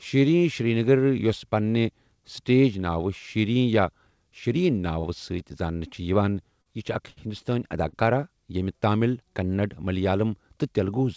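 At 5.00 to 5.07 s, a short stall from a late packet: the jitter buffer ran dry, so the receiver held the last sound for 37 ms until the packet arrived. Nothing is lost, but the speech hangs briefly with a slight buzz or dip.

At 6.62 to 6.75 s comes a short concealed packet loss. About 40 ms of audio never arrived, and the gap was patched with 37 ms extrapolated from the preceding sound before blending back. It is heard as a brief smear in the speech.

Two more late-packet stalls follow. At 7.10 to 7.20 s the held sound stretches 64 ms. At 7.89 to 8.04 s it stretches 38 ms, and 20 ms is then trimmed to recover. Each is a momentary drawn-out sound.

From 10.20 to 11.00 s, a jitter buffer speed-up. The buffer had built up surplus delay, so the receiver cut out short pitch-period slices repeatedly, removing roughly 70 ms. The speech runs at about 107% speed at unchanged pitch and sounds hurried.

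Throughout, the call path's band limit leaves nothing above 8 kHz.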